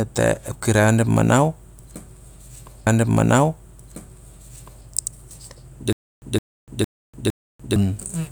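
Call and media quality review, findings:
Stream segment repeated, 2.86–4.86 s: player queued the same segment twice, so about 2.0 s of speech plays again, with a small blip at the jump back.

Stutter with silent gaps, 5.93–7.76 s: likely a stalled stream replaying its last buffered fragment on each retry. A 164 ms burst returns four times, every 458 ms, separated by 294 ms of digital silence. The speech due in that span is lost.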